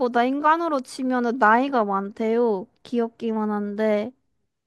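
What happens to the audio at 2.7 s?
Nothing goes wrong at 2.7 s; the speech carries on intact through that moment, with no dropout, click, distortion or other fault.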